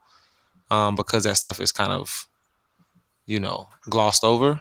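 Right after "um because that", from about 1.41 to 1.51 s, there's a burst of packet loss. A run of packets never made it, so the receiver stretched the last bit of sound for about 80 ms, fading it out, before jumping ahead to "is kind of" with that stretch gone.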